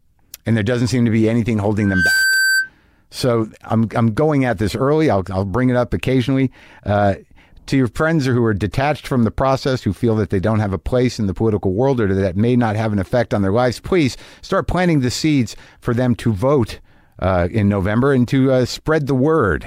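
A microphone picking up its own loudspeaker causes loudspeaker feedback squeal in this speech recording: from 1.81 to 2.70 s, a 1.6 kHz tone swells within about a third of a second to roughly the speech's level.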